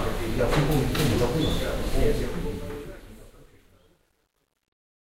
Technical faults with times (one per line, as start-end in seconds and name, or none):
2.05-5.07 truncation distortion on a fade
4.76 audio missing between chunks